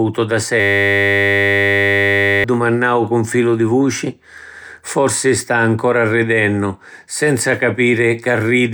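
A system hang loop runs from 0.6 to 2.44 s. The playback system stalled while the sound hardware kept replaying the same short stretch of its ring buffer, about 180 times, producing a steady buzz at 100 Hz instead of speech. The 10 ms loop points to a very short buffer. When normal playback resumes, roughly two seconds of speech are gone, skipped over during the stall.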